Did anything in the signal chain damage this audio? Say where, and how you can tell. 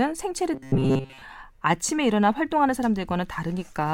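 Yes. From 0.54 to 1.22 s the speech turns into a rigid, metallic buzz locked at about 133 Hz, still loosely tracking the words. This robotic sound from repeated short buffers most likely comes from the driver or buffer stage starving: with audio arriving too seldom, a roughly 7.5 ms block is replayed over and over, covering most of that stretch while the real signal is skipped.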